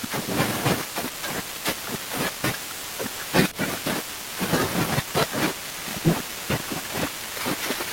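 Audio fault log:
3.51–3.58 s and 5.71–5.80 s, corrupt frame decoded: brief chirpy noise bursts peaking around −20 dBFS, from damaged compressed frames (a couple, then a few) decoded anyway with misplaced energy.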